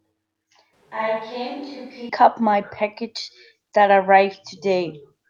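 From 0.73 to 2.09 s the speech abruptly goes roomy and hollow, about 10 dB quieter and noisier, likely a switch to a distant microphone.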